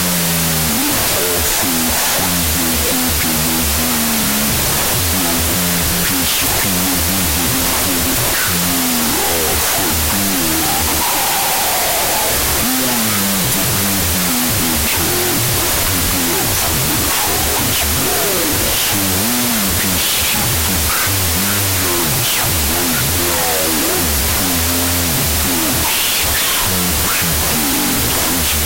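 From start to end the clip suffers a wrong sample width: it sounds like 32-bit float data read as 16-bit integers. Each sample splits into two mismatched values, so loud noise buries the speech, which plays at half speed and an octave low.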